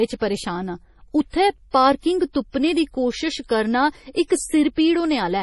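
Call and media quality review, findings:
Speech sounds watery and swirly throughout, treble gone above 11.5 kHz; likely heavy MP3 compression, fits roughly 32 kbps, weak bands flickering frame to frame.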